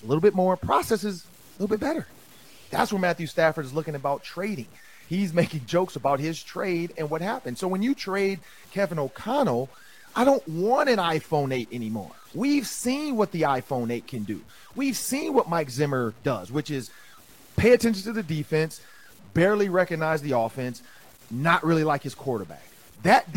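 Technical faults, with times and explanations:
Throughout, low bit depth without dither: the speech carries a grainy, rasping distortion that rises and falls with it, sitting roughly 30 dB below the voice. The quiet tails of syllables turn gritty and the softest passages sputter or drop to silence. This is likely from truncating to about 8 bits without dither. The waveform shows visible stair-steps at low levels, and the spectrogram shows broadband hash that tracks the speech rather than a steady noise floor.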